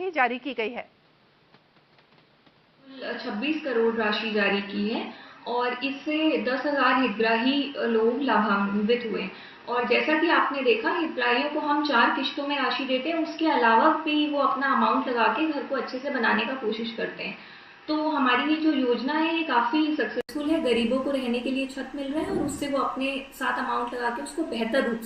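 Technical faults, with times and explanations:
0.0–20.29 s, input switched to a poorer device: dull, nothing above 5.7 kHz, faint added background noise. It clears after an 80 ms gap, likely a device change.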